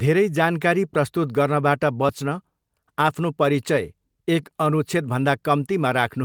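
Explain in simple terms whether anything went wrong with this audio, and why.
Nothing went wrong here: the speech comes through as a steady, continuous signal with no technical faults to point to.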